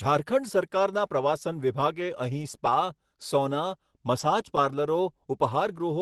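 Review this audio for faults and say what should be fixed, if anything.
Lost packet rebuilt from error correction, 4.19 to 4.25 s: about 40 ms of speech, consistent with two lost 20 ms packets, was filled from the lower-bitrate copies carried in the following Opus packets. There is no gap, but that stretch sounds rougher and noisier than the surrounding Opus call audio at 24 kbps with a 12 kHz bandwidth. To prevent it, reduce packet loss on the network path, for example with a more stable connection or prioritised voice traffic.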